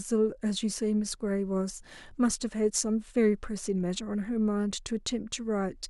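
A speech clip with no audible technical faults.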